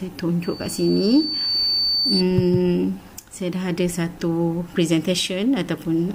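A loudspeaker feedback squeal runs from 0.43 s to 2.24 s. A single tone at 4.5 kHz appears and swells over roughly a second until it sits at about the same level as the rest of the sound. The microphone is picking up the loudspeaker it drives. At that one frequency the loop gain exceeds unity, so the tone keeps reinforcing itself until it stops at 2.24 s.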